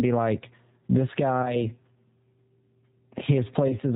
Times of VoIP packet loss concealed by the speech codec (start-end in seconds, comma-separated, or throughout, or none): 1.42-1.67, 3.68-3.76